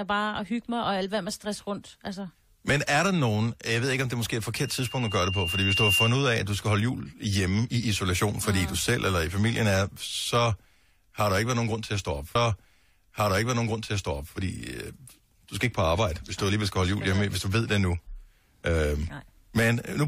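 From 4.56 to 6.27 s, right after "det er måske et", there's loudspeaker feedback squeal: the mic picks up its own speaker, and a 2.8 kHz tone swells over about a second and a half to a few dB above the speech. At 12.34 s, just after "til at stå op", a stream segment is repeated: the player queued the same chunk twice, so about 2.0 s plays again, with a small blip at the jump back.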